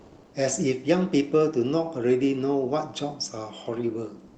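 Comfort noise in place of the background, 0 to 0.33 s and again from 4.27 s to the end: in these pauses the real background, about 30 dB below the loudest sound, becomes a smooth, featureless hiss at roughly the same level, likely from Opus discontinuous transmission switching off during silence over a call path limited to 8 kHz.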